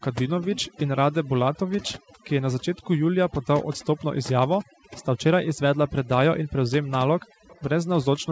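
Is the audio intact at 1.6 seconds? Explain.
No. The overdone noise removal runs through the whole clip, including 1.6 s: the denoiser was set so hard that it pulls bands down whenever they sit near its noise estimate, leaving a near-silent background with twinkly specks.

Right before that, from 1.54 to 1.59 s, there's a very faint delayed copy of the speech arriving about 307 ms late. That's likely an echo leak, where a speakerphone's echo canceller let some of the far end's playback slip back into the call as a quiet scrap.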